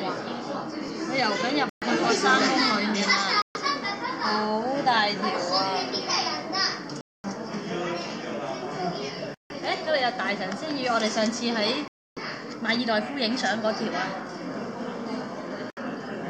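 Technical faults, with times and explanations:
1.69, 3.42, 7.01, 9.34, 11.88 and 15.70 s, Bluetooth stalls: the sound drops to silence for 68 to 288 ms, then resumes. This is likely from delayed radio packets starving the headphone buffer. Waveform shows flat gaps, spectrogram blank vertical bands.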